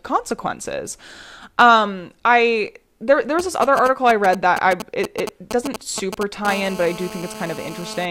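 From 3.39 to 6.47 s, after "I there there", GSM signalling bursts break in. A nearby 2G phone's radio bursts are rectified into galloping ticks and 217 Hz buzzes, nearly as loud as the speech.

From 6.48 to 8.06 s, a steady GSM phone buzz follows as the phone enters a call. The 217 Hz burst rate becomes a raspy, harmonic-rich drone, about 14 dB below the speech.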